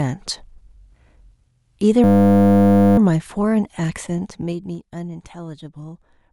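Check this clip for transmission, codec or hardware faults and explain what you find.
Two faults are audible in this speech clip.

From 2.04 to 2.98 s there is a system hang loop. A frozen driver leaves the hardware replaying one 10 ms buffer, so the sound becomes a steady 100 Hz buzz rather than a dropout or a slower stutter.

From 4.01 to 4.78 s there is zipper noise. The level falls by about 15 dB in 2 dB steps, about ten per second, with no smoothing. The result is audible ticking, unlike a clean fader move.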